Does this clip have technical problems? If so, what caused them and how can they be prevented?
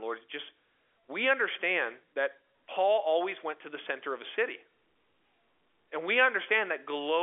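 No, there's nothing here that needs fixing: the speech simply sounds like an ordinary phone call carried over G.711 telephone coding, so nothing comes through above about 3.6 kHz, just as you'd expect on a landline.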